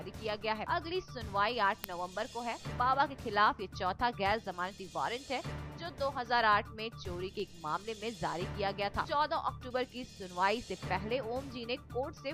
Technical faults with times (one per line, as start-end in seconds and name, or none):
0.45-11.56 word clock ticks